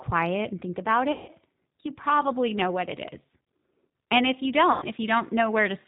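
Speech here has passed through the G.729 codec, and the narrow, slightly rough and synthetic quality throughout fits an 8 kbit/s G.729 stream. The decoder rebuilds each 10 ms frame from a vocal tract filter, a pitch predictor and a few pulses, so nothing above 4 kHz survives. VoIP packet loss concealed by the speech codec occurs twice. The decoder lost packets and extrapolated from its last pitch and filter while fading the gain. From 1.12 to 1.31 s, after "and think about" and before "you probably know what", the sound smears into a buzzy tone or coloured noise that fades, which points to about 160 ms of lost packets. From 4.72 to 4.86 s, just after "if you", a shorter smear of the same kind points to about 100 ms lost, and the voice stays weak for a moment after each gap as the decoder recovers.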